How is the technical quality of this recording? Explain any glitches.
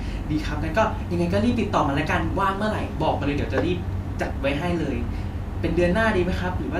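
The recording has no audible glitches. There is nothing in the speech that needs explaining.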